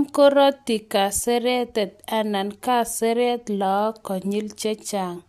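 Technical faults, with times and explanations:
No technical faults detected in the speech.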